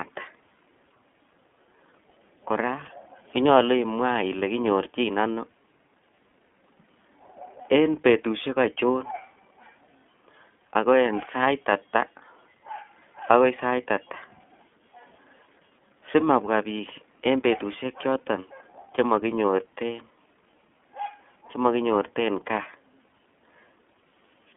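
iLBC codec damage runs through the whole speech clip. Each 30 ms frame's excitation is coded on its own, without drawing on the previous frame, which leaves the speech plainly rough and slightly synthetic. The character fits iLBC's 13.33 kbps mode. The line band sits between 150 Hz and 3.4 kHz, nothing above 3.6 kHz gets through, and the result sounds thin and telephone-like, with the brightness of sibilants gone.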